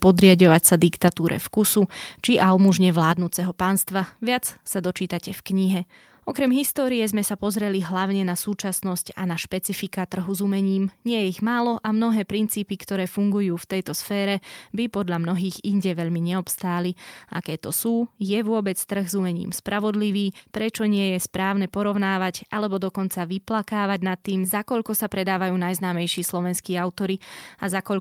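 A speech recording whose level drops twice in single abrupt steps. At 1.08 s, just before "vkusu či almu mužne", everything falls by about 6 dB at once. At 3.12 s, right after that same phrase, it drops again by about 5 dB. Voice and background sink together. This is a microphone volume stepped down, likely the call software lowering the input gain after judging the signal too hot.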